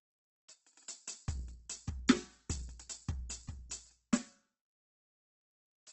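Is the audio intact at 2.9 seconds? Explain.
No. At 2.9 seconds the music carries the same damage as the rest of the clip: tones sound grainy, rough and noisy, with nothing above about 8.2 kHz. This is most likely Opus compression in its CELT music mode at a very low rate, around 12 kbps. The encoder preserves each band's overall energy but has too few bits for detail, so it fills bands with folded lower content or noise. On a spectrogram this shows as a hard ceiling at 8.2 kHz and smeared, noise-textured harmonics instead of clean lines.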